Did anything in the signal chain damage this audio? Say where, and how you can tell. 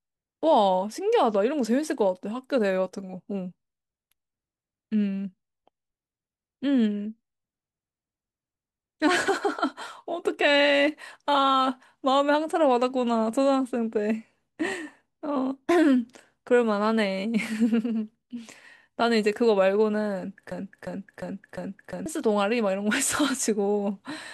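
Yes. From 20.52 to 22.06 s the speech turns into a broken-record loop: a 0.35 s fragment plays four times back to back, identical each pass, and whatever should have filled that stretch is gone. Likely a playback or streaming buffer stalled and kept replaying its last chunk.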